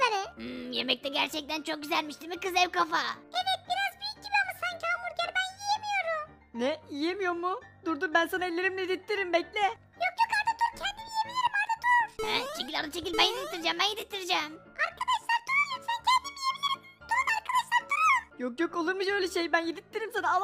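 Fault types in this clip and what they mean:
No faults can be heard.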